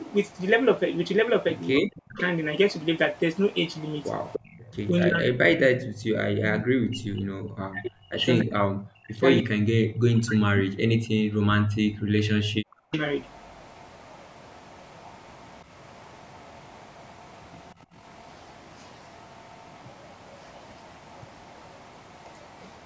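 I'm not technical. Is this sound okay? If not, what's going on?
No. There are three problems, all typical of a speakerphone call.

Echo leak: from the start to 4.58 s, and from 12.94 s to the end, a faint copy of the speech follows about 0.3 seconds behind. This is likely the far side's loudspeaker being picked up by its microphone and sent back.

Speech suppressed in double talk: at 1.81 to 2.15 s, 4.9 to 10.55 s and 11.5 to 13.0 s, the speech dips or cuts out in pieces. Likely both sides talked at once, and the echo canceller turned everything down.

Background gated by the echo canceller: at 4.58 to 4.62 s, 5.94 to 6.07 s and 10.86 to 11.22 s, the room sound briefly drops away, then returns. The canceller clamped the microphone while the loudspeaker played.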